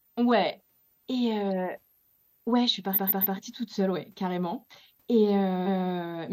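A switching supply whistle runs throughout, a thin high tone wandering between 12.7 and 14.4 kHz roughly 40 dB below the speech. Repeated frames stutter at 2.93–3.35 s, after "ouais je suis", where a 139.3 ms block replays three extra times, and at 5.62–5.90 s, where a 278.6 ms block plays twice.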